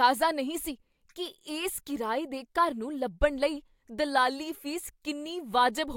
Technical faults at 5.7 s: none

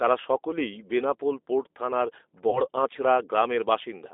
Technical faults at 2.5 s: G.729 codec; VoIP packet loss concealed by the speech codec

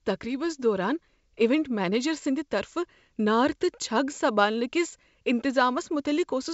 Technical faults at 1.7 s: none

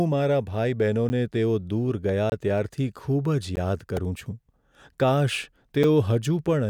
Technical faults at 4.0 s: repeated buffer

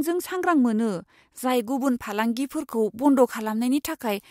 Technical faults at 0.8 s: none

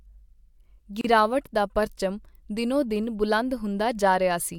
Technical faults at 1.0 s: gap at a join of encoded pieces

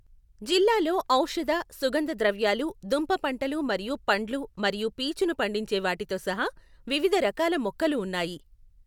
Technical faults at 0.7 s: none

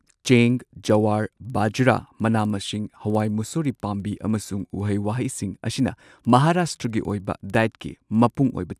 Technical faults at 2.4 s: resampler restarted on every block

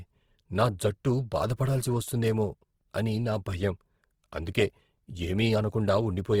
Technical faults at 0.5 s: Opus compression

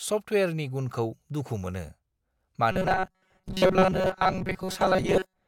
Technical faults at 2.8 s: robotic sound from repeated short buffers

